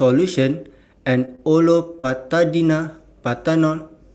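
Short concealed packet loss occurs at 1.25 to 1.43 s, including a second gap at 1.35 to 1.40 s, and again at 1.95 to 2.00 s and 2.00 to 2.05 s. Around 20 ms of audio went missing each time, and 40 ms in the last gap. The receiver patched each hole by extending the preceding sound for roughly 20 to 40 ms and then crossfading into the real signal. The result is a brief smear or wobble, with the last two gaps running together into one longer blur.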